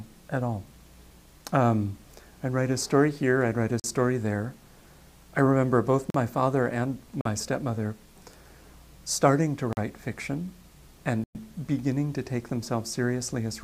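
At 3.80, 6.10, 7.21 and 9.73 s the audio drops into a block of digital silence about 43 ms long, which fits a 2048-sample buffer not being filled in time. Each one cuts out and back with no fade, leaving a brief hole. At 11.24 s there's a longer one, about 111 ms, which comes across as a more obvious gap.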